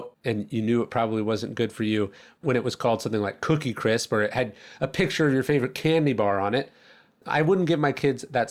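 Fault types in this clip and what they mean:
Nothing to list here, since there's no fault to be heard anywhere in this bit of speech.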